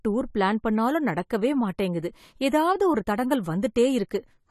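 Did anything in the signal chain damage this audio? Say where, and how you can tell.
Yes, at the codec stage: likely AAC compression, with nothing above 14 kHz throughout, which fits a low bitrate near 32 kbps. The coarse quantisation leaves the speech audibly dull and smeared.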